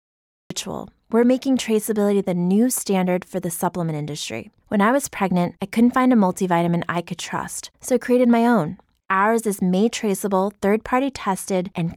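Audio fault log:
0.00–0.50 s, cut-off start: the speech begins from digital silence and jumps straight into sound at 0.50 s, already mid-utterance, with no natural attack or fade-in. Capture started late, so the onset before that point was never recorded.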